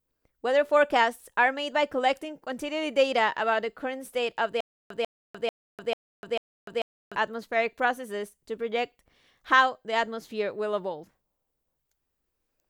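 The stream likely stalled from 4.61 to 7.16 s, a stutter with silent gaps: one 145 ms burst repeats five times between 298 ms digital silences.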